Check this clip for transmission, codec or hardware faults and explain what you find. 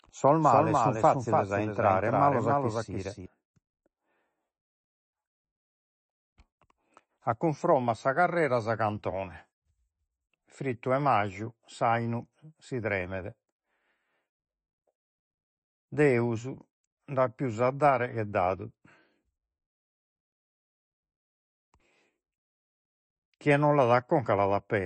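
Two faults are present: one throughout the clip, one at the start.

Throughout, the speech sounds watery and swirly with nothing above 8.3 kHz, likely MP3 compression at a low bitrate, around 24 kbps, starving weak frequency lines.

From the start to 3.26 s, a second full-band copy trails by about a third of a second, a few decibels quieter, then stops abruptly: likely a doubled audio track.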